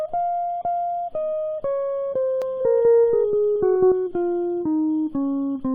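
A music clip with a doubled audio track from 2.42 to 3.92 s. A second full-band copy trails the original by about a fifth of a second, at roughly equal level. It has no decay or room colour and cuts in and out abruptly. Two copies held out of step by a slower capture path or an edit are the likely cause.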